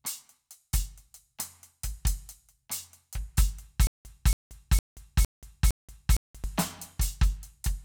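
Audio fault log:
3.87 to 6.44 s, stutter with silent gaps: the music locks onto a fragment of about 280 ms and plays it five times, each repeat followed by about 180 ms of dead digital silence, so the burst comes back every 460 ms or so at a steady pace. It's likely a stalled player or stream replaying its last chunk on each retry before running dry, and whatever music belonged in that stretch never arrives.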